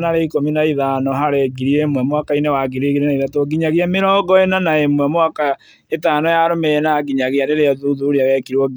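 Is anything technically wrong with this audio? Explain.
No, nothing technically wrong stood out on listening to this speech recording.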